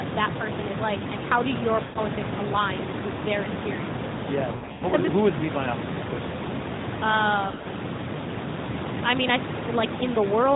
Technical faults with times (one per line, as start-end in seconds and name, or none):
1.84-1.99 lost AMR speech frames
4.52-4.95 lost AMR speech frames
7.48-7.66 lost AMR speech frames